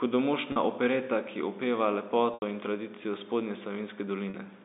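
Packet loss with pitch repetition breaks the speech three times: at 0.52 to 0.56 s, just before "opereta ki opeva"; at 2.34 to 2.42 s, right after "opereta ki opeva"; and at 4.30 to 4.34 s. Each time, incoming audio goes missing and the receiver fills the hole by looping the last pitch cycle. The 40 ms gaps, which fit two lost 20 ms packets, sound like a briefly held, buzzy tone. The 80 ms gap repeats long enough to fade toward silence before the speech cross-fades back, all within the 250 Hz to 3.7 kHz G.711 telephone band.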